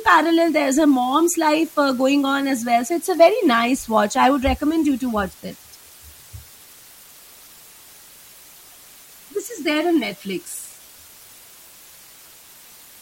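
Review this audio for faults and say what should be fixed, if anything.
Low bit depth with dither, throughout: the speech is rounded to about 7 bits with dither added, so the error becomes a steady, even hiss roughly 25 dB below the speech, with no distortion. To prevent it, record and export at 16 bits or more, and reduce bit depth only once, at the final stage.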